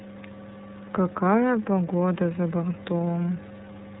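Across the whole speech clip the sound is boxed-in and telephone-like, with nothing above 4 kHz, and it carries a plainly audible roughness, a slightly synthetic texture. This is the signature of the iLBC codec, a narrowband VoIP coder that encodes each frame's excitation independently of the previous one. The coarseness points to the 30 ms frame mode at around 13.33 kbps, where the frame-by-frame modelling trades naturalness for robustness.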